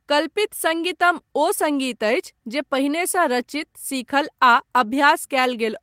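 A speech clip with one brief fault. At 4.55 s there is a lost packet rebuilt from error correction. About 20 ms of audio sounds rougher and noisier, with no gap. The decoder played a low-bitrate copy from the next packet, which fits one lost 20 ms Opus frame.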